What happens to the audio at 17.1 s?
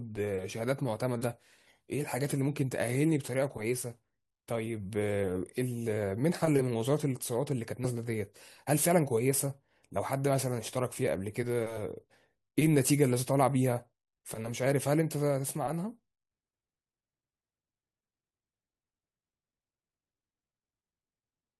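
Nothing goes wrong at 17.1 s; the speech carries on intact through that moment, with no dropout, click or distortion.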